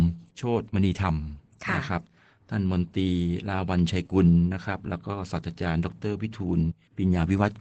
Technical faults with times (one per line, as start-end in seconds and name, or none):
0.00-7.61 Opus voice compression